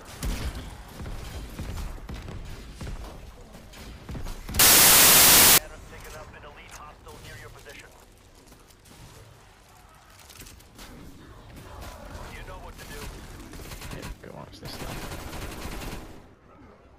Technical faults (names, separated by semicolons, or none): samples built from the wrong bytes